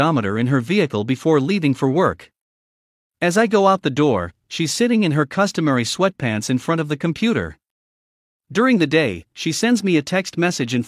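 No technical faults can be heard anywhere in this speech clip.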